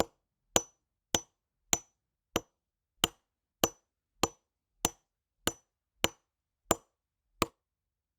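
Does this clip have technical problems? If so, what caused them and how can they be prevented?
Yes. Compressed frames are skipped at 2.39 to 2.42 s and at 7.49 s. Whole 10 ms frames never reach playback, so the audio jumps ahead by roughly 20 ms, then roughly 40 ms. Prevent this with reliable transport and storage, plus error concealment in the decoder.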